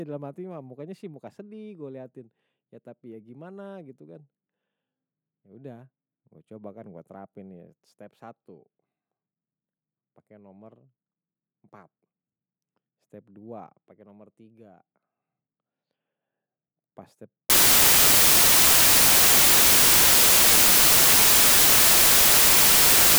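Samples built from the wrong bytes from 17.50 s to the end of the speech: misassembled bytes turn the low bits into each value's bulk, giving loud, harsh broadband noise.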